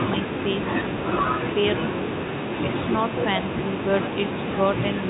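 No technical faults can be heard in this speech.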